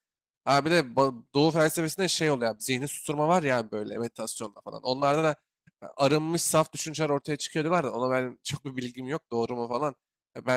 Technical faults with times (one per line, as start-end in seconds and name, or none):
none